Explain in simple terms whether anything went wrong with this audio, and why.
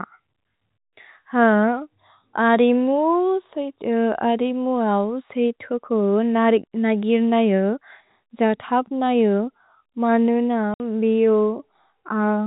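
Yes, one thing went wrong. At 10.74 seconds the speech drops out completely for 60 ms, until 10.8 seconds. This is packet loss filled with silence. The sound travelled in small chunks called packets. A couple of them never arrived, and the receiver played nothing in their place. The gap starts and stops abruptly, so you may hear a click at each edge. The hole's length fits two lost packets of 30 ms each. The G.711 telephone coding is working as expected. It simply limits the sound to a phone-like range, with nothing above 4 kHz.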